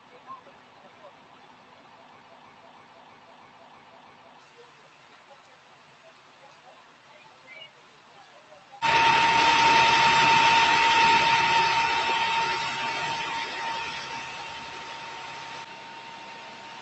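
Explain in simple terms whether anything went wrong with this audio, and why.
Two things went wrong. First, a noise suppressor built for speech was left switched on, so it treated steady sound, room ambience and fading tails as noise and pushed them down hard. Throughout the clip, sustained sound sinks and recovers in big swings, giving a pumping, thinned-out feel while sharp attacks still get through.

Second, from 2.19 to 4.39 s there is a broken-record loop. Most likely the player or stream stalled and kept resending the last fragment it held, so a piece about 0.32 s long repeats seven times back to back, and the audio that should have played then is missing. The call path carrying the sound, which stops at about 8 kHz, was working as designed.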